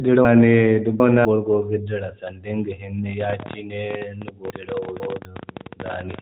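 From 0.25 to 1.25 s there's a chunks-out-of-order fault: a 250 ms chunk plays three chunks late, after audio that should follow it. Nothing's missing, but that second of speech comes out jumbled.

At 3.21 s a train of clicks starts and runs to 6.2 s, about fifty ticks at an uneven 17 or so per second, peaking around 10 dB above the speech and audible in the gaps too. Likely some nearby interference or a struggling interface.

Inside that, 4.5 to 5.25 s has another chunks-out-of-order fault, this time with a 250 ms chunk two chunks late, so it's another scrambled stretch. All of it sits in narrowband mobile-style audio with nothing above 3.8 kHz.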